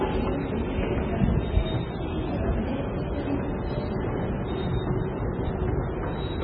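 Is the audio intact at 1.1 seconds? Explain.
No. At 1.1 seconds, as throughout the clip, the sound is watery and swirly, with smeared attacks and nothing above 5 kHz. This heavy damage is likely from MP3 compression at a very low bitrate, around 16 kbps, which cuts the treble and switches weak frequency lines on and off.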